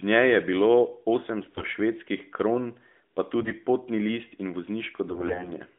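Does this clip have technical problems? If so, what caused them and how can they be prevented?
Yes. Three bursts of AMR bit errors occur at 1.42–1.71 s, 3.40–3.54 s and 5.08–5.53 s. The speech keeps its pitch and loudness but turns hoarse, scratchy and gargly. Flipped bits in the weakly protected parts of each frame misplace the excitation pulses and skew the pitch, gain and spectral values, while the protected core still decodes. The rate is a few percent, highest in the middle burst. Unlike lost frames, there are no gaps or smeared repeats. Within the narrow AMR narrowband band the degradation sounds hoarse rather than silent. Prevention: improve radio coverage or switch to a lower AMR mode with stronger channel coding on weak links.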